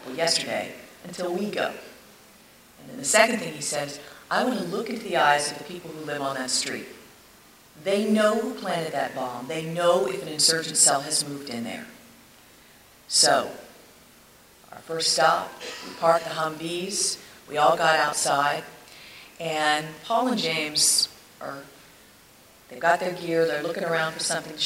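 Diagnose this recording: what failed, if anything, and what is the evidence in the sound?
The fault is a channel delay (doubling) at the driver or buffer stage. One channel arrives about 42.7 ms behind the other, which fits a buffer of 2048 samples left in one side's path. The two sides are then summed to mono, so every onset sounds twice at equal level. The result is a short slap echo or doubled attack that lasts from start to finish, rather than comb-filter colouring.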